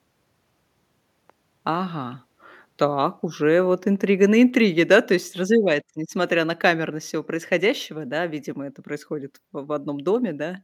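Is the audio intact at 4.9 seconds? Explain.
No. From 4.92 to 4.95 s, just before "то есть", there is microphone overload, likely from the input gain being set too high, so the peaks drove the converter about 2 dB past its ceiling. The tops of those waveform peaks are sliced flat, affecting a small share of samples, roughly 2%. The result is a short, harsh crackle riding on the loudest part of the sound, a brittle edge lasting about 30 ms.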